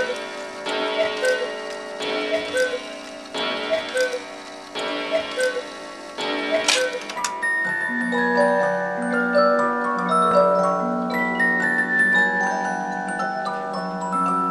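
At 10.31 s there is a block of digital silence. About 2 ms of the sound drops out, likely from a late-filled output buffer, giving a tick or dip.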